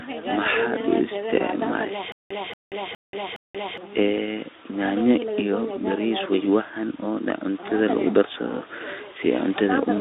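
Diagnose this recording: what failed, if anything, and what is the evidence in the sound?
Playback or streaming stage: from 2.12 to 3.78 s, a 230 ms fragment repeats four times with about 183 ms of digital silence between, a stutter with silent gaps, likely from a stalled player retrying.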